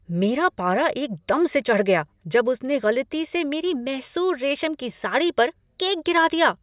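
Listening through this speech recording, nothing technically out of place stood out at any point.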